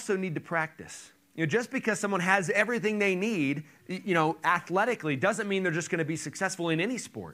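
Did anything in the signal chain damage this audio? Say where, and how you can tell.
No, nothing in the signal chain damaged this audio.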